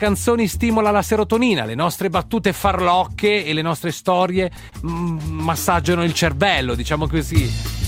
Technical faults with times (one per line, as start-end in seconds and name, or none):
4.11-4.74 repeated stalls (stutter)
5.36-6.05 jitter buffer slow-down